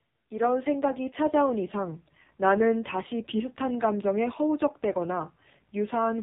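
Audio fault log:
throughout AMR narrowband mobile codec. Nothing above 4 kHz survives. Sparse pulse coding leaves speech buzzy and synthetic, with heavy damage suggesting a bitrate near 6 kbps.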